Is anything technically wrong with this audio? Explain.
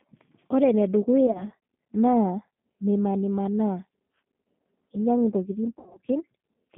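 Yes. The speech has passed throughout through the G.729 codec at 8 kbit/s. It rebuilds each 10 ms frame from a vocal tract filter, a pitch predictor and a handful of pulses within a roughly 150 Hz to 3.5 kHz band, so the voice sounds plainly rough and synthetic.

VoIP packet loss concealed by the speech codec occurs at 1.27 to 1.44 s and 5.79 to 5.99 s. The decoder stretched its last pitch and filter at falling gain over about 40 ms, then 120 ms of missing audio, including one 70 ms gap. The sound turns into a buzzy tone or coloured noise and fades, staying weak briefly afterward.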